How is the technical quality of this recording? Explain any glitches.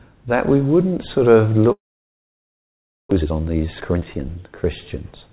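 The technical quality is compromised by two connected faults: a long gap in the middle and a hurried stretch after it. The audio, carried over a narrowband call path with nothing above 4 kHz (consistent with G.711 at 64 kbps), shows a hard ceiling at 4 kHz on a spectrogram.

From 1.72 to 3.13 s there is a long network dropout, likely caused by packets failing to arrive for well over a second. The receiver briefly extends the last sound as a fading buzz, then leaves near silence for about 1.3 s. When audio resumes, roughly 0.84 s of material has been lost outright. On a waveform this looks like a short decaying tail followed by a flat line. On a spectrogram it is a smeared band that fades into an empty gap.

From 3.17 to 5.30 s a jitter buffer speed-up follows. The dropout left the buffer holding about half a second more delay than its target. To recover, the receiver repeatedly cut out tiny pitch-period-sized slices. 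The audio plays at about 122% speed with unchanged pitch and sounds rushed. A spectrogram shows compressed timing with harmonics at the same heights, and the waveform shows frequent small splice points.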